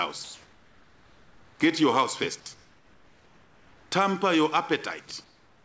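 From 0.24 to 1.60 s the background between sounds turns into a flat, even hiss with none of its original texture. That's comfort noise in place of the background, likely from discontinuous transmission: the sender stopped sending during the quiet stretch and the receiver synthesised a rough stand-in. Here it sits at about the same level as the real background, which was already about 32 dB below the loud parts, so you notice the texture going featureless more than any jump in level.

At 2.44 s the sound comes back in with a hard, abrupt start. Its soft opening is missing, about 20 ms of it. That's an onset clipped by the voice detector, likely because the detector was a beat slow to notice activity, so those first moments went out as comfort noise instead of the real thing.

The same comfort-noise swap happens again from 2.54 to 3.92 s and from 5.24 s through to the end. This time the fill drops about 6 dB below the real background, so those gaps sound noticeably quieter as well as smoother. 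Across the whole clip, the G.722 call path leaves nothing above 8 kHz.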